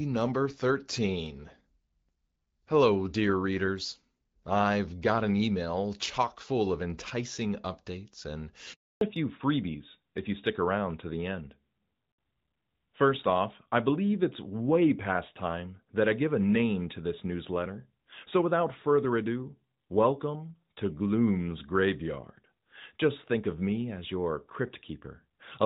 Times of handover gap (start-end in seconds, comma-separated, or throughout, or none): 8.73-9.01